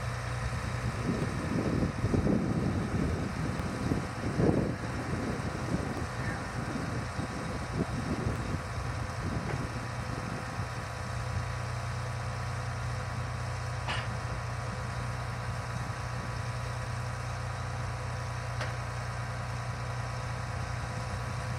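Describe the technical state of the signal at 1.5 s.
At 1.5 s the signal sits inside a run of regular clicks from 1.22 s to 20.27 s, repeating every 2.38 s. These are likely clock drift buffer slips: two clocks roughly 500 ppm apart force a buffer to drop or repeat about fifty samples periodically.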